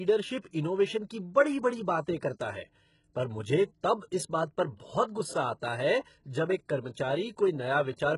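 The speech has likely passed through HE-AAC compression at a very low bitrate, around 12 kbps by the sound of it, with treble rebuilt from copied lower bands. Throughout, sibilants turn gritty and metallic, the top is synthetic, and nothing sounds above 11.1 kHz.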